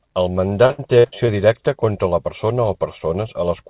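From 0.66 to 1.3 s, just before "directa contra la persona", repeated packet loss (robotic sound) breaks up the speech. About five short holes, the longest 66 ms, are patched by stretching the preceding sound, so roughly a third of the stretch is filled in and sounds choppy. Unlike a single dropout, the choppiness keeps recurring throughout, heard over the narrowband, telephone-like sound of a G.711 call with nothing above 4 kHz.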